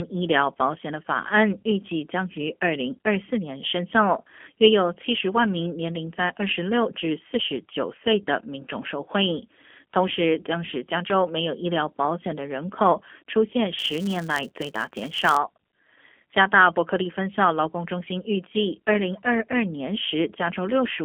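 A speech clip carried through a G.729 codec from start to finish, with the damage plainly audible. The sound points to the G.729A variant at 8 kbit/s, which models the voice as a vocal tract filter plus a pitch predictor and a few pulses per frame. It comes out slightly rough and synthetic, confined to roughly a 250 Hz to 3.4 kHz telephone band. On a spectrogram, energy stops hard near 3.4 kHz, leaving the upper region empty, with smeared, slightly grainy harmonics below. From 13.79 to 15.38 s there is also a filter restarted on every block. The filter drops its memory at each block boundary and starts again from silence, so every block opens with a small transient. The result is a buzz at about 188 Hz that rises and falls with the speech level, which fits 256-sample blocks at 48 kHz. A waveform shows evenly spaced clicks at each boundary, and a spectrogram shows thin vertical lines at that spacing plus a harmonic comb at 188 Hz and its multiples.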